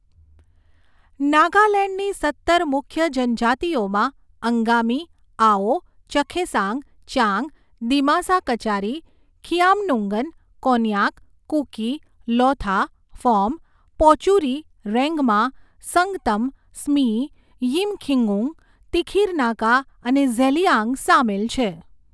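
Speech recording with no audible technical faults.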